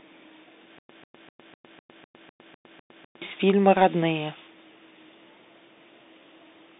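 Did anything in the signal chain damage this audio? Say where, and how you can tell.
Yes. Throughout, the sound is boxed into a narrow telephone band, with nothing below about 200 Hz or above 3.7 kHz. There is a gritty, granular hiss underneath, s sounds come out scratchy, and loud bright moments break up. That is the Bluetooth CVSD headset codec at the codec stage. It sends a single up-or-down bit per sample and adapts its step size, which fits a 64 kbit/s link. Fast, loud high content outruns the step, and the steady step error becomes that hiss.

From about 0.78 s to 3.22 s there is a stutter with silent gaps. A 141 ms fragment plays, then about 110 ms of dead digital silence follows, and the pair repeats on an even 251 ms cycle, nine times. The audio that belonged in that span never arrives. The likely cause is a stall in the playback or stream buffer: at each retry the player replayed the last fragment it held, then ran empty until the next attempt.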